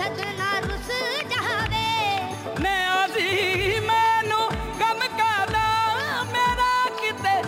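Throughout, crude rate conversion repeats samples with no filtering, fitting a 44.1 kHz to 48 kHz step, leaving an inharmonic, gritty fizz roughly 25 dB below the sound.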